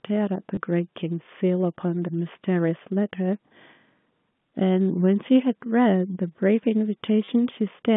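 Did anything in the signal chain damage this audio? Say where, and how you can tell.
Yes, at the network stage: packet loss with the last packet repeated, at 0.55 to 0.57 s and 7.25 to 7.28 s. Lost packets were covered by replaying the previous one, so each gap of 20 ms and 30 ms is a brief stutter, which fits packets of about 10 ms. A plain dropout would leave a silent hole instead. The G.711 telephone band of 150 Hz to 3.5 kHz carries the repeats intact.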